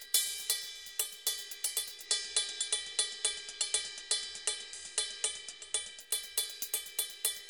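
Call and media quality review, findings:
Hiss rises from 1.94 s to 6.12 s, level shifts about 3 dB. Digital radio blending to analogue: hybrid receiver lost the digital stream, cross-faded over 167 ms to the station's FM broadcast, faint hiss well below programme, then blended back.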